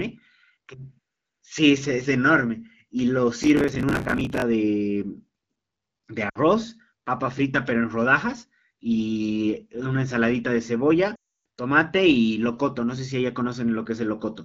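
Speech carried over an AMR wideband (HD Voice) link, its light coding roughness consistent with a mid rate around 12.65 kbit/s. From 3.43 to 4.42 s a processor too busy to keep up misses dozens of roughly 10 ms buffer deadlines in a row, repeating stale audio at hard edges; this processor overload crackle sounds like gritty tearing over the speech that stops once the load eases. Lost AMR speech frames follow, when corrupted radio frames force the decoder to reuse its last good pitch and vocal tract settings at falling gain. At 6.29 to 6.39 s about 60 ms is lost, the voice dropping to near silence within two frames. At 11.15 to 11.43 s a 300 ms run drops the voice to near silence within two frames before the speech returns weak or rough.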